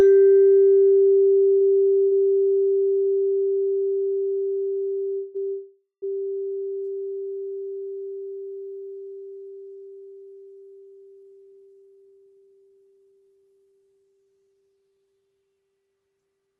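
From 1.55 to 3.07 s the music suffers repeated stalls, a stutter. Packets arrived late, and the jitter buffer ran dry four times. Each time the receiver stretched the last sound to fill the hole. About 198 ms was filled in all, and the longest gap was 76 ms. Nothing is lost. The passage drags and hiccups, and about 13% of that span is filler.

Two call audio freezes follow. The first runs from 5.15 to 5.37 s. The second runs from 5.49 to 6.04 s. In the first, about 194 ms of continued sound fills the wait. In the second, 536 ms is filled, and the last 130 ms fades to silence. The music then resumes where it stopped. The cause is likely packets held up in transit, emptying the jitter buffer. Each freeze inserts a gap into the music, and nothing is missing.

From 11.23 to 15.43 s there is a jitter buffer speed-up. Delayed packets had built up too much buffered audio. To cut the delay, the receiver snipped out many short pitch-period pieces, roughly half a second in total. 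The music plays at about 113% speed with its pitch unchanged. It sounds rushed, and the tempo no longer holds steady. Throughout the clip, the Opus call path tops out near 12 kHz.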